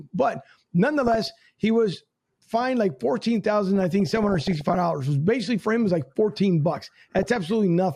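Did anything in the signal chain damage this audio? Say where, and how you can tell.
Yes. DAB burbling occurs at 1.03–1.30 s, 3.76–4.75 s and 6.79–7.37 s, a reception-stage fault. Bit errors slip past error correction and corrupt MP2 samples and scale factors, so individual sub-bands jump in level for up to a frame, leaving short blips of noise over the speech.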